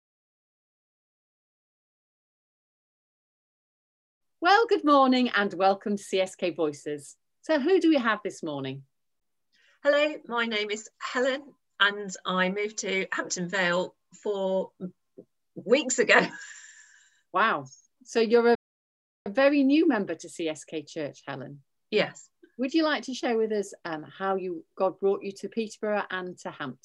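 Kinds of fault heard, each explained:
Playback stall: the sound cuts to silence mid-flow for about 0.71 s, from 18.55 to 19.26 s, likely because the player ran short of data.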